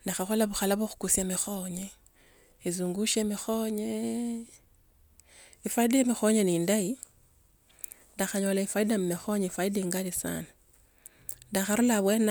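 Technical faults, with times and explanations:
No technical faults are audible.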